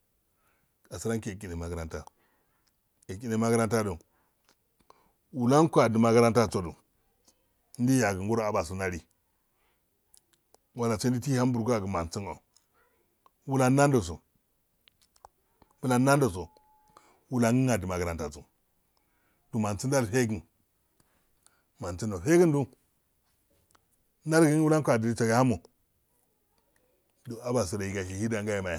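Nothing stood out as a technical problem when listening to the speech in this recording.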